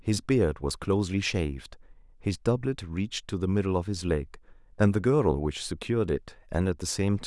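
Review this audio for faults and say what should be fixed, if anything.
No faults; nothing to fix.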